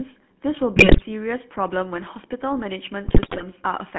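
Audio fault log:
throughout, GSM full-rate codec: the speech sits in a narrow telephone band of about 150 Hz to 3.5 kHz. A vocal-tract model driven by sparse, regularly spaced pulses rebuilds it, consistent with a 13 kbit/s full-rate coder, leaving a plainly audible buzzy, gravelly roughness.
0.76 to 1.05 s and 3.06 to 3.43 s, GSM bit errors: corrupted bits reach the decoder here, so damaged filter, pitch and gain values warp the spectrum and jolt the level frame by frame. The voice breaks into squawks, pops and gargling, pointing to several percent of bits flipped.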